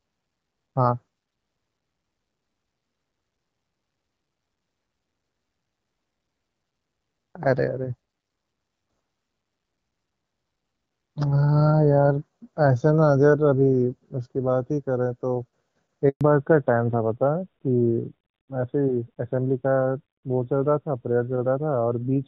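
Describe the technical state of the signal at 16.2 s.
At 16.2 s the signal is coming out of a handover gap that runs from 16.09 to 16.21 s. For 120 ms no speech frames arrived while the call switched networks, so the sound dies away quickly and drops to silence. Whatever was said in that span is lost.

From 16.21 s to the end, a fallback to narrowband follows. The call has dropped from the HD Voice wideband codec to an older narrowband one, which fits AMR-NB at about 12.2 kbit/s. Nothing above 4 kHz survives, so the speech sounds duller and rougher than before the gap.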